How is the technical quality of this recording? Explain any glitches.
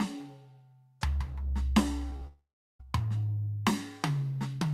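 The music is marred by two connected transmission faults in a burst from about 2.10 s to 2.84 s.

From 2.10 to 2.27 s there is repeated packet loss, heard as a robotic sound. Four short holes, the longest about 24 ms, break up the music in quick succession. The receiver covers each hole by extending the audio that came just before it. About a third of this 0.17 s span is patched-over material, so the music turns choppy.

Right after, from 2.27 to 2.84 s, comes a long network dropout, likely a stall in delivery. About half a second of the music is lost. The receiver first carries the last sound forward as a fading buzz, then falls silent for roughly 0.37 s. The music returns further on, missing the passage that was never received, with a small extra slice of about 15 ms cut at the rejoin.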